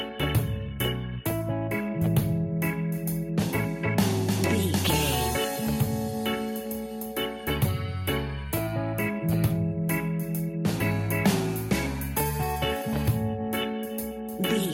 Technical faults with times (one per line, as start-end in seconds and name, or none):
none